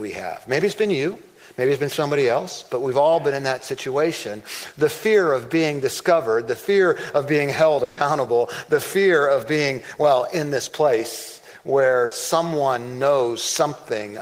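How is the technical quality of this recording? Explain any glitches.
The recording has three network dropouts in which audio went missing.

Burst of packet loss, at 7.83 to 7.99 s and 12.05 to 12.13 s: about 140 ms and then 60 ms of audio never arrived. The receiver stretched the last sound while fading it, giving a held buzz or dimming hiss. On a spectrogram this shows as frozen, smeared bands that decay before the real audio resumes.

Short concealed packet loss, at 8.75 to 8.79 s: about 20 ms was missing, and the receiver patched it with a continuation of the preceding sound. It is heard as a brief smear or wobble. In the waveform it appears as a tiny blurred seam.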